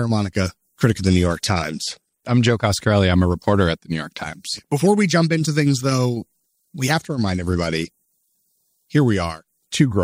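From 0.92 to 2.53 s the treble suddenly dulls and a gritty, grainy noise rides on the sound, then clears; the same thing happens again from 6.93 to 8.47 s. This is a Bluetooth SBC bit pool drop. Squeezed for bandwidth, the encoder starved its upper sub-bands and quantised the rest coarsely, a degradation that fits a fall from a bit pool near 28 to about 13, roughly 102 kbps, before the rate recovered.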